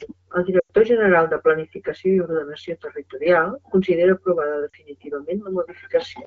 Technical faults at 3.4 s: none

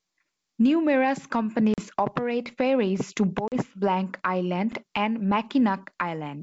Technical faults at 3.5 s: packet loss on an ADPCM call

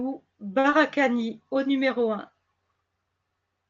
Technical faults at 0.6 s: short stall from a late packet

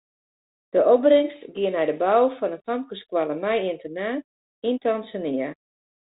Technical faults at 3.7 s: none

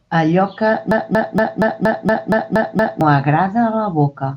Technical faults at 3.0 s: broken-record loop

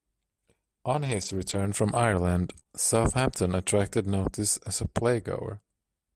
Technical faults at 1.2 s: lost packet rebuilt from error correction

